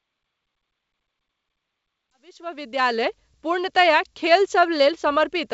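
Nothing's wrong with this speech clip: the level eases up in a gentle fade-in that begins around 2 s and finishes at 3.31 s, and the top end stops near 7.7 kHz, which is just what wideband G.722 telephone coding at 64 kbit/s sounds like, so none of it is a fault.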